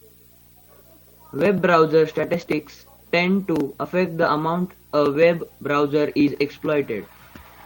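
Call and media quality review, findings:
Video or display buzz throughout: 59.94 Hz field-rate buzz with hash above, plus a 15.7 kHz line-rate whine, around 25 dB below the speech. Display or video cable coupling into the audio path.

Lost packet rebuilt from error correction, 2.41 to 2.43 s: one 20 ms frame sounds rougher and noisier. Decoder played the low-bitrate forward error correction copy carried in the next packet.

Short concealed packet loss, 2.45 to 2.49 s: a brief smear where 20 ms never arrived. The receiver extrapolated the preceding sound, then crossfaded back into the real stream.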